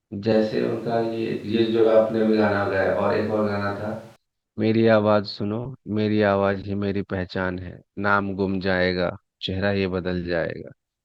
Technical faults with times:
0.33-4.16 switch to a distant microphone

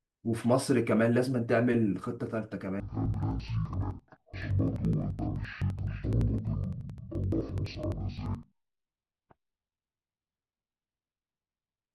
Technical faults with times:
2.80-11.95 interleaved audio read as planar

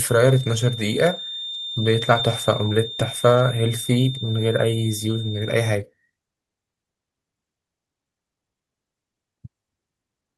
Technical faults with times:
0.00-5.82 feedback whistle
2.05-2.19 lost packet rebuilt from error correction
3.35-3.37 lost packet rebuilt from error correction

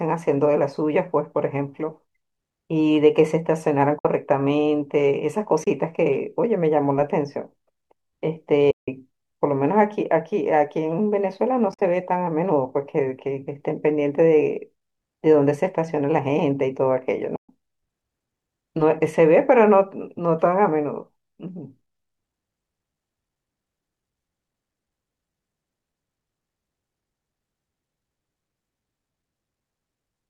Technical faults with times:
3.98-4.05 AAC frame loss with muting
5.63-5.67 AAC frame loss with muting
8.71-8.88 AAC frame loss with muting
11.71-11.82 AAC frame loss with muting
17.36-17.49 AAC frame loss with muting

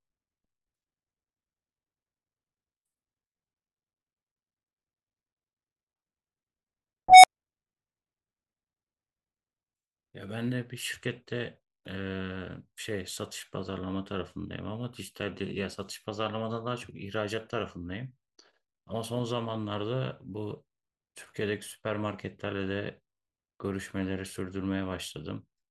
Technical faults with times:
7.08-7.27 unstable filter

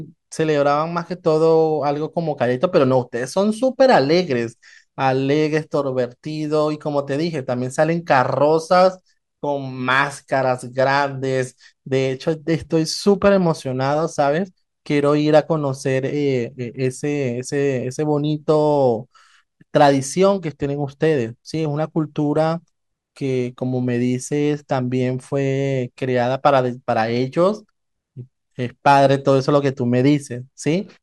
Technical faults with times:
none

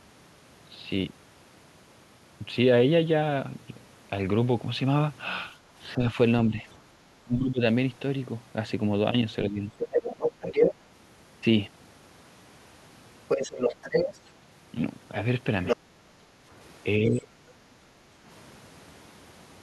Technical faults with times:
5.59-5.72 background gated by the echo canceller
5.97-7.61 speech suppressed in double talk
9.48-9.75 speech suppressed in double talk
9.78-10.75 other side's voice leaking through
13.28-17.15 other side's voice leaking through
15.76-17.32 speech suppressed in double talk
15.77-18.23 background gated by the echo canceller

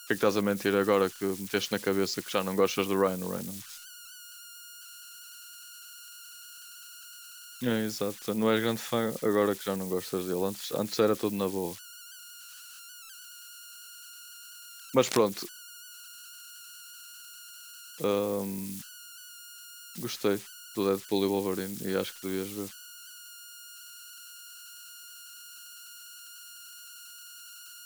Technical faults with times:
0.00-27.86 converter idle tones
14.99-15.17 cable scratch noise

